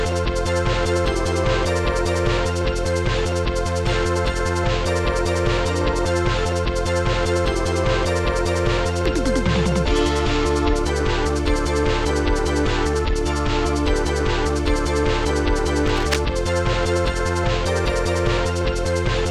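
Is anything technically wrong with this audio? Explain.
Yes. From 15.86 to 16.17 s, a dense, uneven scratching and rustling sits over the sound, around 10 dB below it. This cable scratch noise is likely caused by a worn cable, connector or control being moved, its contact resistance fluctuating rapidly and injecting bursts of noise.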